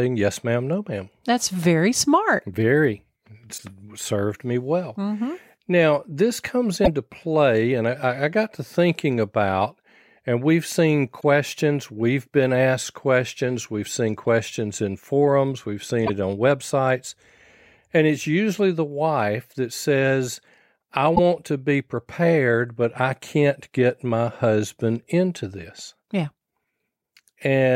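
At 3.54–3.60, 6.81–6.88 (after "this comes"), 11.17–11.23, 16.03–16.10 (before "on websites") and 21.12–21.19 s (after "wife that says I"), damaged data in the compressed stream makes the decoder lose sync, giving brief disturbances of about 60–70 ms. Each is heard as a chirp, squawk, click or short hole.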